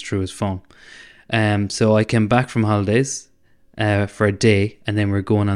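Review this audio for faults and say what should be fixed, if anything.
Nothing stood out on listening to this speech recording, so there is nothing that needs fixing.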